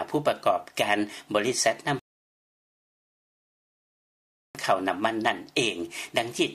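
At 1.99 s the player runs out of downloaded audio, a rebuffering stall: the sound drops to silence until 4.55 s, then resumes exactly where it stopped, adding about 2.55 s.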